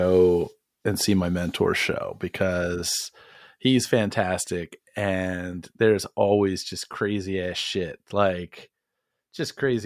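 No dropouts, clipping, glitches or other technical faults are audible anywhere in the speech.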